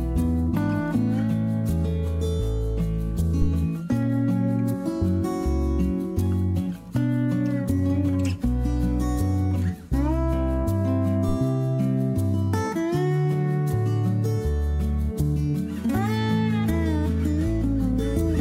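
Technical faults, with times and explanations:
3.42 to 3.48 s, phantom power thump: a single deep bump peaking at about -13 dBFS and decaying within 14 ms, as a supply voltage step on the live input passes through the coupling capacitors. Unlike a plosive or handling knock, it carries no breath or rubbing texture.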